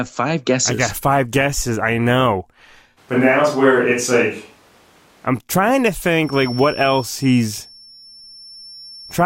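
From 2.99 s to 5.26 s the speech turns roomy and hollow. The bass thins out. The loudness stays about the same. A faint room noise rises, still far below the speech. Then it snaps back to the close sound. This points to a switch to a distant microphone. The likely cause is that the close microphone's signal dropped out and a farther one, such as a camera microphone, filled in. The hard edges at both ends reveal the switch.

At 6.19 s a feedback whistle appears and runs to the end of the clip. It is a thin, steady tone at 5.4 kHz. It sits about 20 dB below the speech and swells and fades slowly in level. It never grows into a howl. The likely cause is a loudspeaker-to-microphone loop held right at the edge of feedback. At that point one frequency rings on without building up.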